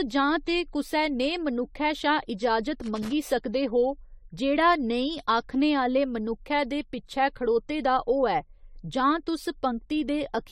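Generation loss runs through the whole clip: the speech has a swirly, smeared, hollow quality, consonant attacks are blurred, and nothing remains above about 18.4 kHz. The likely cause is repeated lossy encoding, around seven passes through something like AAC-LC at 64 kbit/s. Each new pass quantises on a shifted frame grid, so the noise and spectral holes of every generation stack up and the sound degrades more than a single 64 kbit/s encode would.

Loose connector crackle comes in from 2.84 to 3.13 s, right after "नेहे मनुक्खै शा इजाजत" and just before "सकदे हो". A worn or dirty contact is making and breaking rapidly, chopping the signal on and off. It sounds like an irregular burst of scratchy crackle laid over the speech for just under a third of a second.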